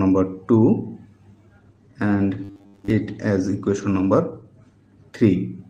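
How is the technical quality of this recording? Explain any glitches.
The recording has two faults, and they overlap.

From 1.59 s to the end, there is a call bitrate drop. The encoder's budget falls from 64 kbps to 16 kbps. It stays at its lowest for about 2.2 s. With fewer bits, the codec quantises more coarsely. The audio bandwidth also shrinks from 20 kHz to 12 kHz. The sound loses its top end and turns rougher. It does not recover before the clip ends.

From 2.44 s to 2.90 s, the sound becomes a rigid, metallic buzz at 100 Hz. It tracks the original only loosely. This is robotic sound from repeated short buffers. The likely cause is audio arriving too seldom. The software filled the gaps by replaying the last chunk, which fits a 10 ms buffer. Most of the real audio in that span was skipped.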